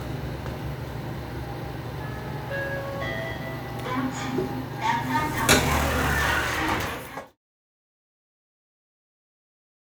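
No technical faults are audible.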